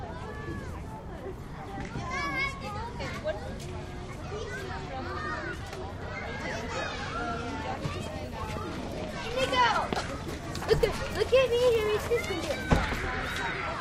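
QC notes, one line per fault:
No faults heard.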